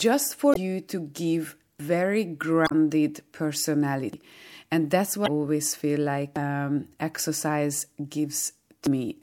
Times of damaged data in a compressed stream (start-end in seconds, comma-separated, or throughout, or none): 0.51-0.57, 2.64-2.72, 5.24-5.28